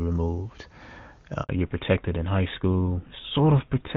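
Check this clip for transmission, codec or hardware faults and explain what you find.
Two faults are audible: a brief dropout followed by a lasting loss of bandwidth.

Handover gap, 1.43 to 1.49 s: the speech dies away and returns after 60 ms of silence. During a handover to another network, no speech frames arrived for that stretch, so that fragment of the talker is simply missing.

Fallback to narrowband, from 1.49 s to the end: right after the gap the speech turns duller and rougher, with nothing above 4 kHz. Before the dropout the clean, wideband sound fits HD Voice at a high rate such as 23.85 kbit/s. The call then switched to an older narrowband codec, likely GSM full rate, which discards the upper band.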